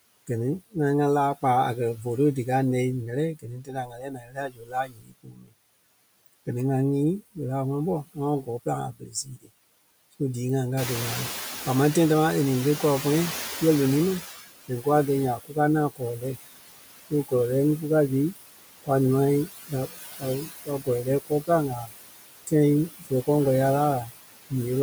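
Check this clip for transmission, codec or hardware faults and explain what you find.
The faults here all come from the noise suppressor, not from transmission, the codec or the hardware.

Noise suppressor artifacts run through the whole clip. The background sinks in the gaps and swells back under the speech. The suppressor estimates the steady noise and turns down each frequency band it attributes to it, frame by frame, here by about 19 dB.

Speech cut by the noise suppressor occurs six times: 3.35 to 5.54 s, 8.14 to 9.5 s, 14.21 to 16.25 s, 17.1 to 18.89 s, 19.47 to 21.91 s and 22.47 to 23.28 s. Soft consonants, endings or quiet stretches sound swallowed, dipping by about 16 to 21 dB. The first span is the worst, with roughly two seconds affected. The later ones lose a fraction of a second each. The suppressor mistook these low-level speech parts for noise and attenuated them with the background.

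The noise suppressor is catching up from 10.77 to 14.35 s. The room noise jumps by about 12 dB near 11 s, and this rise is real room noise rather than a fault. At first the louder noise comes through with less reduction. It then sinks over about 3.6 s, settling at roughly 14 dB of cut. The suppressor's noise estimate lagged behind the sudden change and needed that time to adapt.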